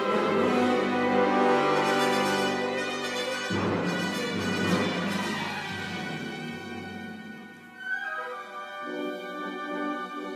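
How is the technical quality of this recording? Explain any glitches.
One fault affects the opening: channel delay (comb filtering) from 0.00 to 3.83 s. One channel lags the other by roughly a single sample, and summing them to mono cancels high frequencies, with the first notch near 20 kHz. The result is a slightly dulled top end.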